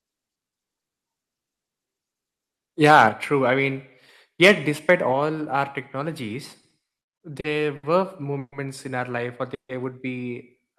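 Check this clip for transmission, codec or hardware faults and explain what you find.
The speech has four kinds of fault: clipping, two sudden level drops, a stuttering stretch and two short freezes.

Microphone overload, 2.85 to 3.06 s: peaks run about 7 dB past full scale, likely from input gain set too high, so a few percent of samples are flattened at the converter's limit. The loudest syllables turn harsh and crackly. On a waveform the tops are squared off; a spectrogram shows broadband smearing above the voice.

Microphone volume stepped down, at 3.09 s, just before "true I mean", and at 5.13 s: the level drops abruptly by about 5 dB, then about 4 dB, likely the call software cutting the device's input gain, the first time right after the clipped peak. Voice and background fall together. The waveform envelope shrinks in one step, and the spectrogram darkens uniformly across all frequencies.

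Repeated stalls (stutter), 6.61 to 7.85 s, after "our technologies": packets arrived late over and over, so the jitter buffer kept running dry. Each time, the receiver stretched the last sound through the wait. Seven stalls add about 190 ms of filler, the longest 70 ms, with nothing lost. The speech drags and stutters. A spectrogram shows short frozen, repeated slices interrupting the normal flow.

Call audio freeze, 8.39 to 8.54 s and, after "in our life or", 9.54 to 9.71 s: delayed packets, likely, emptied the buffer. The last sound is held as a fading buzz or hiss, then silence lasting about 40 ms and 130 ms respectively, before speech resumes where it stopped. The waveform shows a decaying tail into a flat gap; the spectrogram shows horizontal smeared bands fading to blank.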